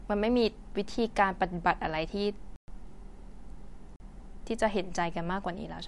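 The speech sounds watery and swirly from start to finish, with nothing above 11.3 kHz, so sibilants lose their top and turn metallic. This is most likely MP3 compression at a low bitrate, in the region of 55 kbps. The encoder ran short of bits, cut the treble at a fixed frequency, and dropped weak frequency components that flicker on and off from frame to frame, producing the swirl.

At 2.56 s the sound stops dead and returns at 2.68 s, leaving a 120 ms hole. At 3.96 s a shorter 40 ms gap, ending at 4.00 s, registers as a short hole. Both are blocks of digital silence, where stretches of samples were replaced by zeros. The signal jumps to and from silence with no fade.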